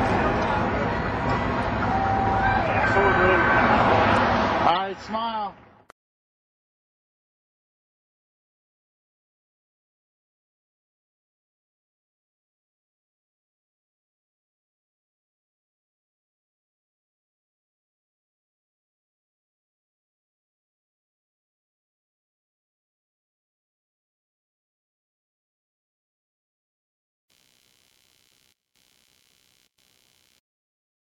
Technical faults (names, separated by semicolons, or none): corrupt frame decoded; computer activity noise